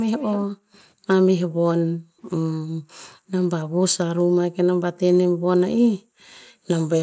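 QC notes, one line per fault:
0.19–0.79 s, echo leak: a faint, delayed copy of the speech trails the original by about 190 ms, roughly 15 dB down. This is likely the far end's loudspeaker output reaching its microphone and getting past the echo canceller, then being sent back down the line.
0.47–1.07 s, 1.48–1.59 s, 1.91–2.21 s, 2.63–3.32 s, 3.66–3.80 s, 4.23–4.36 s, 5.30–6.68 s, background gated by the echo canceller: the room tone repeatedly dips or vanishes, by about 40 dB in most of these and about 27 dB at 4.23 s, then comes back. The echo canceller is clamping the microphone down hard whenever the loudspeaker plays, and it releases afterward.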